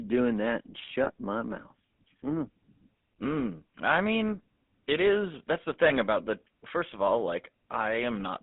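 From start to finish the speech carries GSM full-rate codec damage, and it is plainly audible. The codec rebuilds each voice from a vocal-tract model excited by coarsely spaced pulses, so voiced sounds take on a buzzy, gravelly grain, which fits the 13 kbit/s full-rate coder. A spectrogram shows a hard band of roughly 200 Hz to 3.6 kHz, empty above, with smeared, grainy harmonics instead of clean striations.

At 1.04 to 1.09 s, and again at 5.88 to 5.92 s, there are lost GSM frames, each a single 20 ms frame. The decoder fills the gap by repeating the last good frame's settings, so a brief rough, metallic ring replaces the speech. On a waveform each shows as a short stretch of repetitive cycles. In the spectrogram it is a thin column of frozen, unchanging formant bands.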